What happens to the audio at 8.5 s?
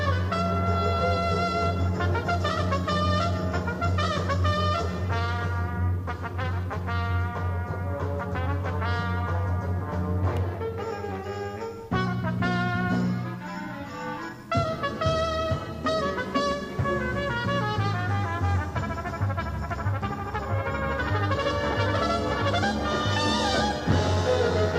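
Nothing goes wrong at 8.5 s; the audio plays through that moment intact, with no dropout, click, distortion or other fault.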